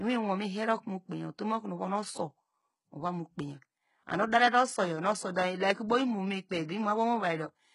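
The speech was likely squeezed through HE-AAC compression at a heavy setting, which fits around 12 kbps: the treble is rebuilt by copying lower bands upward, stopping at 11.1 kHz, so sibilants sound gritty and metallic throughout.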